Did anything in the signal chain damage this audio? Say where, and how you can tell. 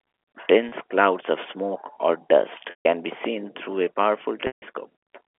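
Yes, the network dropped packets, and the receiver's concealment covered them with pitch repetition. At 0.69 s there's a short 30 ms gap, which fits one lost packet, that comes across as a briefly held, buzzy tone. At 2.70 to 2.85 s and again at 4.47 to 4.62 s the losses run about 150 ms, so the repeated pitch period fades to silence before the speech cross-fades back. The G.711 phone band plays through underneath it.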